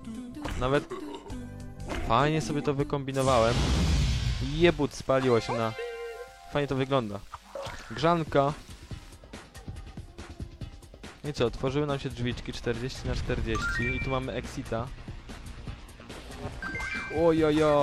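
Around 0.79 to 0.84 s and again at 15.33 to 15.38 s there's damaged data in the compressed stream: the decoder loses sync on corrupted frames, giving short glitches, heard as a chirp, click or brief hole.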